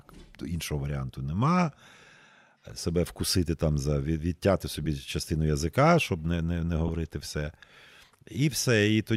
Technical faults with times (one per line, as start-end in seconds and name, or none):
4.84-4.86 lost LE Audio frames
6.88 lost LE Audio frames